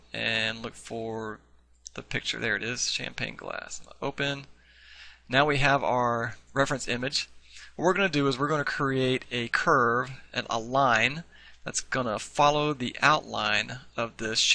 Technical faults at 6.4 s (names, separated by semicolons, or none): none